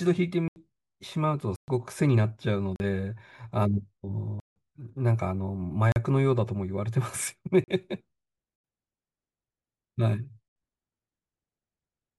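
Blocks of digital silence cut the speech at 0.48, 1.56, 2.76, 4.4, 5.92, 7.64, 8.56 and 10.48 s. They last 40 to 160 ms, always in 40 ms steps, which fits output buffers of that size not being filled in time. Each hole drops abruptly to silence, with no fade. That sets it apart from a faded or smoothed-over dropout.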